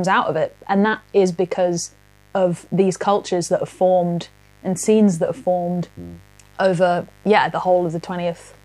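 A poorly shielded or dimmer-affected power path lets switching spikes from the 50 Hz mains into the speech recording, twice per cycle, so a steady, raspy mains buzz with harmonics reaching into the kilohertz range sits under the whole clip, roughly 35 dB below the speech.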